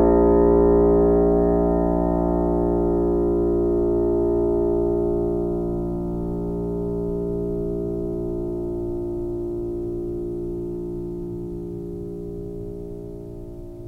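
Nothing goes wrong anywhere in this bit of music, so there's no fault to point to at any moment.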